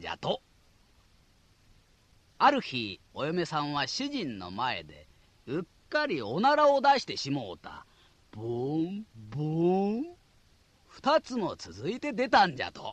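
Nothing is technically wrong with this audio.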